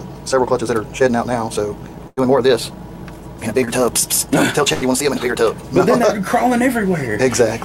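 The audio runs rushed from 0.0 to 5.56 s, about 1.69 times normal pace with pitch unchanged, likely a time-stretched section, which would show as compressed, jumpier spectrogram patterns at normal frequencies. Two bursts of packet loss, at 2.07 to 2.19 s and 4.73 to 4.83 s, hold the last sound and fade it over about 95 and 82 ms, skipping about 100 and 80 ms of audio. Each appears as a smooth, decaying band before an abrupt jump. Short concealed packet loss at 3.65 to 3.69 s smears about 20 ms into a brief wobble, visible as a tiny blurred patch in the spectrogram.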